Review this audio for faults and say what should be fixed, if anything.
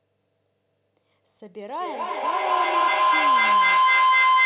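A feedback howl begins at 1.8 s and lasts to the end. Each trip around the microphone-to-loudspeaker loop adds level, so repeats about every 200 ms build into a tone near 1 kHz, peaking about 13 dB above the speech. On a spectrogram it appears as a brightening horizontal band near 1 kHz, below the 4 kHz upper limit that fits a narrowband call codec. On the waveform it is a swelling, dense block. To prevent it, mute all but one device in the room or use headphones, so the loop never closes.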